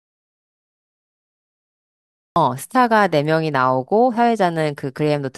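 The input path to this speech recording was likely lost, with the recorder writing silence: an audio dropout to silence runs from the start to 2.36 s, with no room tone before speech begins.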